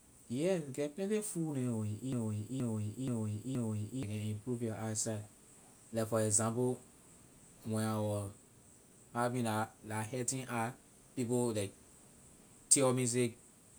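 Speech clip where the stream likely stalled and kept replaying its last buffered fragment, a broken-record loop from 2.13 to 4.03 s: a 0.48 s piece repeats four times back to back, and the speech that belonged there is lost.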